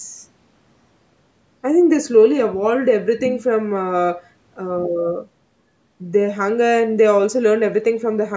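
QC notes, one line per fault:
Nothing to flag here: the speech has gone through ordinary call microphone processing, so the lowest bass is trimmed away and nothing sits above 8 kHz, which is just how that path sounds.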